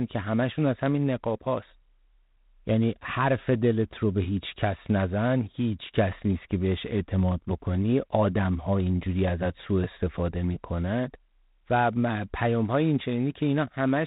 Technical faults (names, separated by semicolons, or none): G.726 ADPCM